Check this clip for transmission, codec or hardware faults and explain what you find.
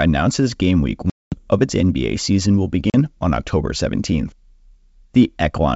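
Two dropouts from packet loss on an ADPCM call interrupt the speech. One runs from 1.10 to 1.34 s, about 220 ms of silence. One runs from 2.90 to 2.95 s, about 40 ms. Each hole cuts in hard. Missing packets knock the decoder's predictor and step size out of step with the sender. So the speech returns with some distortion. It settles within tens of milliseconds. The longer gap suggests around ten lost packets, the shorter about two. The wideband G.722 coding itself sounds clean.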